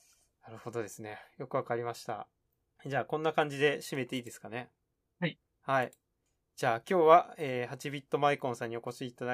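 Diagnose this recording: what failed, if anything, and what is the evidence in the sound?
Nothing failed in this recording.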